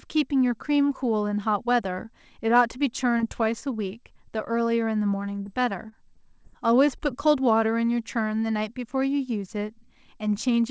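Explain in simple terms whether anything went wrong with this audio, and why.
Something went wrong twice as the speech travelled over the call connection.

Short concealed packet loss, from 3.18 to 3.21 s: one small chunk of audio, about 20 ms, arrived too late for the receiver to use. The receiver hid the hole by stretching the sound just before it, carrying on its pitch or its hiss, and then fading back into the real signal. You hear a very brief smear or tick, and a quick consonant there could be lost.

Scattered short gaps, from 5.09 to 7.01 s: the same kind of loss happened again and again, about seven times in under two seconds. Each hole was small, none much longer than 20 ms, adding up to 60 ms of missing audio. The receiver patched every one the same way, by extending the last sound. The speech stays clear, but this stretch has a handful of little hiccups and wobbles. The connection also carried nothing above 8 kHz.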